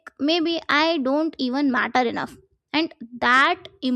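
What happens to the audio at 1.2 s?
At 1.2 s the speech is still under channel delay (comb filtering), which runs from the start to 1.27 s. One channel trails by about a sample, a few hundredths of a millisecond, so the mono sum cancels near 20 kHz, leaving a dulled top. Unlike a flanger, the notch stays fixed.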